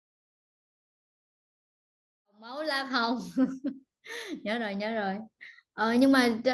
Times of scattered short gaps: none

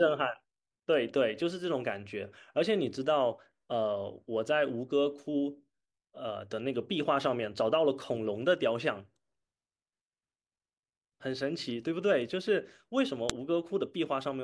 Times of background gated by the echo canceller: none

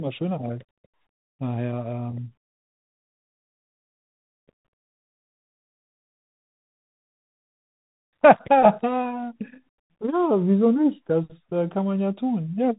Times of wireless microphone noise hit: none

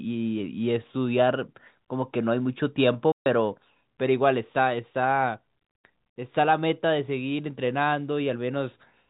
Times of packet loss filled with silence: 3.12-3.26

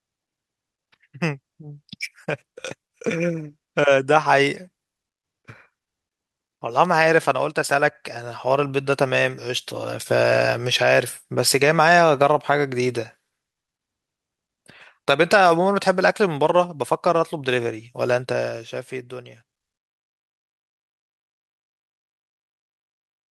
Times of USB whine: none

